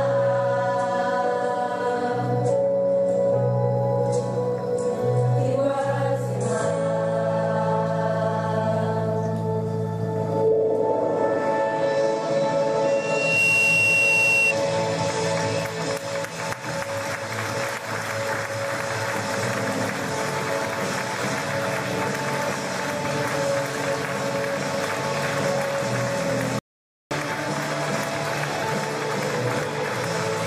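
At 12.84 s a loudspeaker feedback squeal begins. A microphone is hearing its own loudspeaker, and the loop gain tops unity at 2.7 kHz. The tone swells over about half a second and sits roughly 5 dB above the sound. It stops at 14.54 s.

At 26.59 s the audio drops out to silence for 0.52 s, until 27.11 s. The gap is silent with no room tone. This likely comes from the input link failing briefly while recording continued. The sound in that half second is lost.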